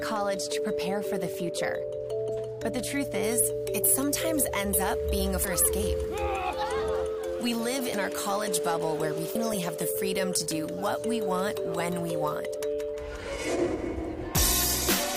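Compressed frames skipped at 2.28 s: around ten 21.3 ms frames never reach the output, so the audio leaps ahead about 200 ms. Pre-emphasis left on from 3.23 s to the end: the treble lift, following a 50 µs FM curve, is never undone. Highs sit about 10 dB hotter at 10 kHz than at 1 kHz, and the sound is thin, bright and sibilant. The same frame skipping returns at 5.44 s and 9.34 s, each losing roughly 300 ms.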